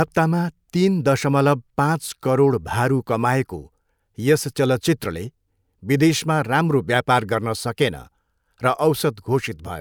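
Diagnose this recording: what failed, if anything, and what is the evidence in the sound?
Listening through the speech recording, nothing stood out as a failure at any stage of the chain.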